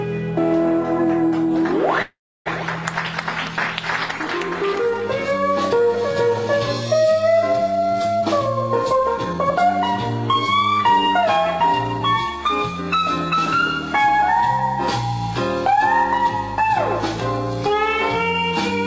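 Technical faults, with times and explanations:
2.02 to 2.48 s, call audio freeze: the sound stretches into a fading buzz, then about 0.3 s of silence. It likely comes from delayed packets emptying the jitter buffer. Nothing is lost; the audio resumes late.
8.19 to 8.37 s, 8.83 to 9.81 s and 10.34 to 12.38 s, jitter buffer speed-up: the audio runs at 132%, 121% and 107% speed with unchanged pitch. Short pitch-period pieces are cut to shrink the delay.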